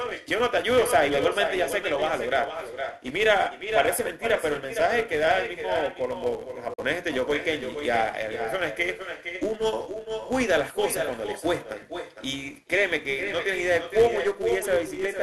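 From start to finish, the speech is trailed by an echo with no canceller. The far end's loudspeaker feeds its microphone, returning everything about half a second later, about 8 dB quieter and thinner. On a spectrogram each syllable has a fainter, delayed duplicate smeared to its right.

Also throughout, a filter restarted on every block puts a small transient at each block boundary, producing a 200 Hz buzz that rises and falls with the speech level. This fits blocks of about 5 ms. A spectrogram shows a harmonic comb at 200 Hz multiples. The waveform shows evenly spaced clicks.

At 6.74 s the audio drops out until 6.80 s, leaving a hole of about 65 ms. The likely cause is a Bluetooth dropout, where packets missed their deadline to the headphones. The speech resumes further on, as though it kept playing. The waveform shows a flat gap, and the spectrogram a vertical blank stripe.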